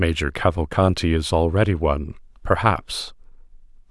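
A short speech recording, and nothing is technically wrong with it.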